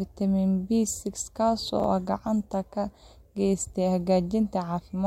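At 1.8 to 1.84 s, just before "gacan ka", the speech shows chunks out of order: one 20 ms block of audio reached the output a single slot late, so it played after the block that should have followed it. No audio is missing, but the two swapped pieces create three abrupt joins within about 40 ms, heard as a brief jumbled stutter.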